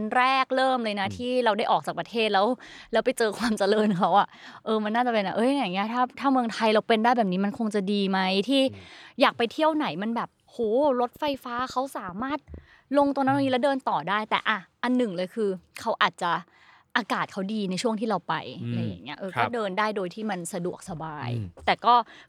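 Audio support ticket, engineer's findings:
Train of clicks, 10.64–13.07 s: likely external interference or a faulty connection or power supply injecting pulses. About fifteen similar clicks, irregular, around 5.35 per second, roughly as loud as the speech.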